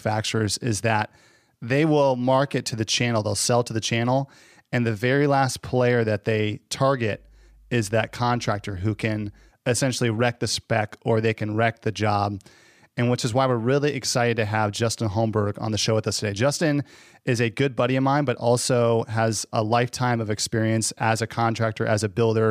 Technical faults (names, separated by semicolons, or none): mains hum